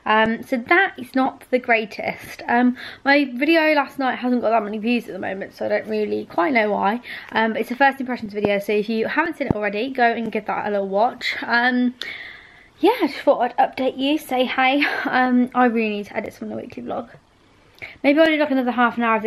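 A sudden voltage step, likely from a plug, switch, static discharge or driver glitch, entered the signal path twice, producing a loud pop from 8.45 to 8.47 s and another from 9.51 to 9.53 s, about 15 and 20 dB above the audio, which continues underneath.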